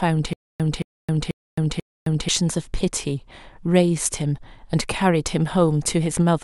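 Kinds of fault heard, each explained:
Stutter with silent gaps, from 0.33 s to 2.29 s: the same 223 ms fragment of speech plays four times, each followed by about 266 ms of dead digital silence, so the burst returns on a steady 489 ms cycle. This is likely a stalled player or stream that, on each retry, replayed its last buffered fragment and then ran empty. Whatever speech belonged in that span never arrives and is lost.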